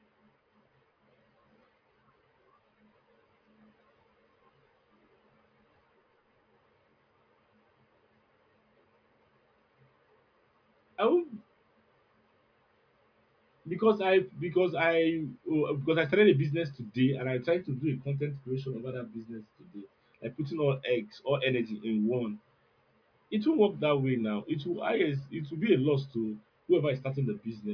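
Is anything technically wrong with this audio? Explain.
No, nothing technically wrong is audible in this recording.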